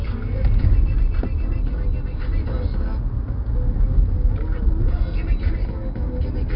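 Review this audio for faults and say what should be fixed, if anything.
4-bit ADPCM compression, throughout: each sample is coded as a coarse 4-bit step from a prediction, leaving heavy gritty hiss that tracks loud sounds and nothing above 5.3 kHz, which fits a low-rate stream around 44 kbps. To prevent it, keep the original at full bandwidth and use a higher-resolution codec instead of 4-bit ADPCM.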